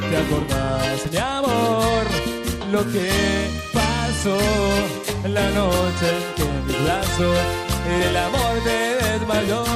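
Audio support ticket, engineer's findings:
Irregular burst of crackle and scratching, 0.93 to 1.09 s, about 0.16 s long. Loose connector crackle: worn or dirty contact in the cable or jack making and breaking under movement, chopping the signal, with pops from any DC on the line.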